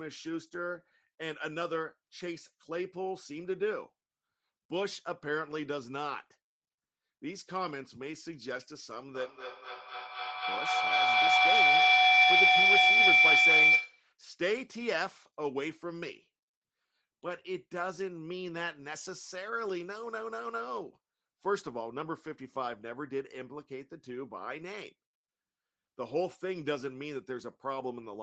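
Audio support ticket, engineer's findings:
Feedback howl, 9.15 s to 14.15 s. Tone near 2 kHz rising to about 12 dB above the speech, repeating roughly every 200 ms. Probable component: two call devices sharing a room. Mic picks up the other loudspeaker; loop gain exceeds unity, so each pass grows and narrows to the loop's favoured frequency. Persists until the loop breaks. Speech band tops out near 8 kHz throughout, consistent with the call codec's bandwidth.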